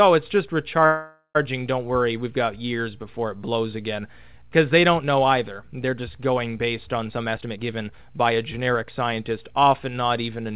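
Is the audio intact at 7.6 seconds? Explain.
No. At 7.6 s the audio is inside a jitter buffer speed-up that runs from 7.09 to 9.39 s. After packets arrived late and bunched, the receiver trimmed many short pitch-period-sized slices to drain its backlog, removing about half a second in total. The sound plays roughly 121% fast and feels hurried, but its pitch stays put. That separates it from a simple resampling speed-up, which would also raise pitch.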